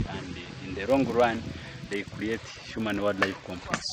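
From 0.82 s to the end, a 50 Hz buzz that follows the signal's level rides on the sound. It comes from a filter restarted on every block, each 20 ms block starting from silence with a small tick.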